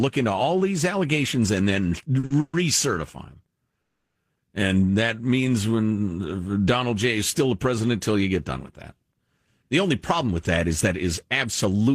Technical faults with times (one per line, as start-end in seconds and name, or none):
2.19-2.32 short stall from a late packet
2.40-2.55 call audio freeze
3.81-4.17 call audio freeze
9.38-11.95 jitter buffer speed-up